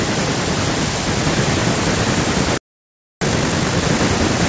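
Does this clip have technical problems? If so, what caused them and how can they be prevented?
Yes. At 2.58 s the speech cuts out mid-flow and the output stays silent until 3.21 s, a gap of about 0.64 s. This is a playback stall, most likely caused by the player running dry of buffered data or its audio thread being blocked long enough that nothing reached the output. A larger jitter buffer and keeping the audio thread free of blocking work would prevent it.

From 3.21 s to 3.83 s the speech comes back hurried, running at about twice normal speed with its pitch unchanged. This is time-compressed catch-up: after the stall, the player clears its backlog by dropping short slices of audio and cross-fading across the joins, which shortens timing without shifting pitch. Avoiding the stall removes the need for catch-up, and a gentler compression ratio would make any remaining catch-up less audible. 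The call microphone processing, which takes out the lowest bass, is part of the normal chain.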